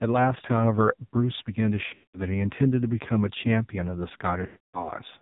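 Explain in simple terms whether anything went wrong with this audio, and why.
Throughout, the speech sounds muffled, thin and buzzy, with a synthetic, robotic edge. That is the AMR narrowband mobile codec, the speech coding used on 2G and 3G phone calls. It cuts away everything above 4 kHz and rebuilds the voice from a simple model of the throat and mouth. Here it runs at a very low data rate, so the damage is heavy and the voice loses its natural texture.

There are two dropouts. From about 1.86 to 2.22 s, the sound smears into a drawn-out warble, fades toward silence, and returns weak and rough. About 4.46 to 4.90 s, the same thing happens again. These are lost AMR speech frames: pieces of the call were damaged in transmission, so the phone stretched out the last good sound while turning it down. The first gap loses 260 ms scattered over 280 ms, including one 200 ms run. The second loses 280 ms.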